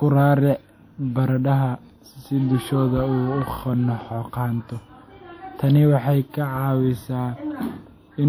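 Throughout the speech, plainly audible codec damage gives a ringing, washy quality, with hiss that breathes along with the voice. The likely cause is WMA compression: long transform blocks smear quantisation noise over tens of milliseconds and drop weak components, which fits a bitrate near 48 kbps.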